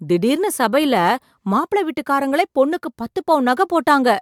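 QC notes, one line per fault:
No audible faults found in this speech recording.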